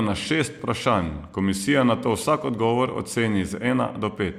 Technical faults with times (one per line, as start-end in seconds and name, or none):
0.59 overlap between stream segments
2.58 overlap between stream segments